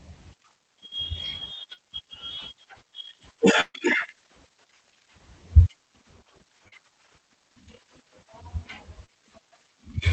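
Short concealed packet loss at 1.73 s: about 40 ms of the call arrived too late, and the receiver extended the preceding sound to bridge the hole, leaving a brief smear. A burst of packet loss at 3.61 to 3.76 s dropped about 140 ms. The concealment held the last sound for roughly 135 ms while fading it, including about 30 ms of silence, before the speech resumed further on. The same short concealed packet loss recurs at 6.68 s (about 40 ms) and 9.06 s (about 20 ms) as small wobbles. All of this passes through a call codec whose narrowed top end points to Opus at around 20 kbps.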